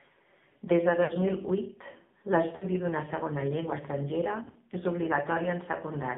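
Speech passed through the AMR narrowband mobile codec at a low mode, which fits roughly 5.9 kbps. The line is confined to 150 Hz to 3.6 kHz, and the heavy coding leaves the voice buzzy, thin and synthetic throughout. Lost AMR speech frames then failed on the radio path, so the decoder repeated its last pitch and vocal tract settings at falling gain. That produces smeared, fading warbles at 1.04 to 1.12 s and 2.56 to 2.67 s, each about 60 ms long, and a longer 100 ms dropout at 4.44 to 4.56 s. After each gap the sound returns briefly weak or rough.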